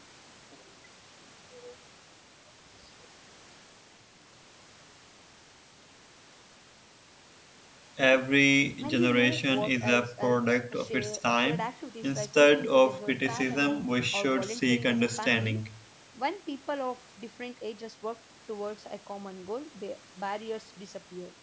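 No technical faults occur anywhere in this speech clip.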